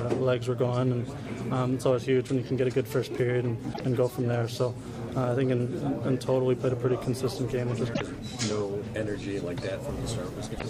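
The audio has damaged data in a compressed stream: brief glitches at 3.70–3.81 s, 7.90–8.01 s and 10.52–10.62 s, where the decoder misreads corrupted frames and resynchronises.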